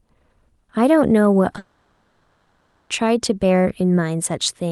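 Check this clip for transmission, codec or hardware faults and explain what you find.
The speech shows two faults close together: a pair of brief concealed packet losses, then a long gap that sounds like a network dropout. The top end rolls off near 12 kHz, consistent with an Opus-type call codec.

Short concealed packet loss occurs twice, at 1.53–1.55 s and 1.56–1.58 s. About 10 ms of audio failed to reach the decoder in time each time. The receiver extrapolated from the preceding speech and crossfaded back, leaving two quick smears or wobbles.

A long network dropout is the likely cause of the break from 1.58 s to 2.91 s, about 1.3 s with no real audio. Concealment never falls to silence here. It synthesises a buzzy, hissy continuation of the last sound that fades over the span until real speech resumes, and the original material from that stretch is lost.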